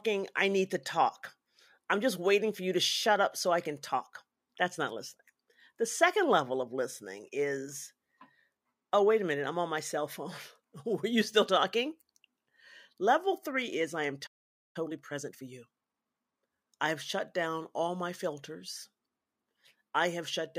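At 14.26 s, right after "three is I am", the speech cuts to silence for about 0.48 s: a playback stall, likely from the player running out of data or its thread being blocked. From 14.76 s to 16.68 s, ending at "I have shut down", the speech sounds hurried, about 1.25 times normal speed at unchanged pitch. This is time-compressed catch-up, where the player trims and cross-fades small slices to clear its backlog.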